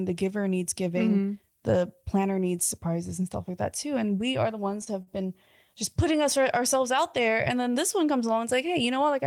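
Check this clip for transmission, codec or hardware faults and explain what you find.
Two short stalls from a late packet turn up in this speech, at 4.84 to 4.88 s and again at 5.02 to 5.09 s, just before "been just putting us". Each time a packet showed up late, the jitter buffer ran dry, and the receiver held the last sound for about 26 ms and then 43 ms before carrying on. Nothing's actually lost, but you hear a brief smeared hold.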